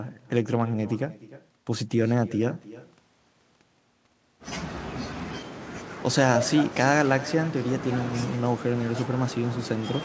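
Throughout the clip, every phrase returns about 18 dB quieter roughly a third of a second later. This is echo with no canceller: the far loudspeaker feeds its microphone, and nothing removes it.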